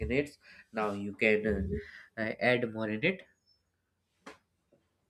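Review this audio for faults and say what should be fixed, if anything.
From 1.71 s to 2.87 s the speech runs 5.6% fast and about 95 cents sharp, then snaps back just before "in it". This is a drift correction step, likely clock-matching software changing playback rate at once. Spreading rate corrections gradually prevents it.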